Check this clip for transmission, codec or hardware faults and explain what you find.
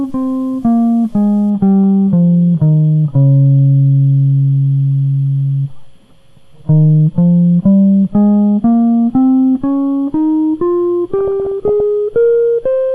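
Three faults stand out in this music clip: codec damage throughout, a grainy opening and a burst of burbling near the end.

From start to finish the sound is dull and gurgling, with a granular edge and upper bands that come and go. That's likely MP2 compression, at a rate that fits about 80 kbps. MPEG Layer II splits the audio into 32 sub-bands, and when bits run short it drops the top bands entirely and coarsely quantises the rest.

From 0 to 1.5 s there's a gritty, grainy distortion that shifts with the music, with its noise sitting around 45 dB below the signal. That points to low bit depth without dither, likely an 8-bit word length with plain rounding. Because no dither was added, the rounding error tracks the signal instead of turning into a steady hiss.

From 11.19 to 11.80 s there's a patch of DAB burbling: bubbling, squelchy chirps over the music. Weak reception let bit errors, something like half a percent, get past the error correction into the MP2 data. 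Corrupted samples then put short blips of noise in single sub-bands, and corrupted scale factors make individual sub-bands jump in level for up to a frame.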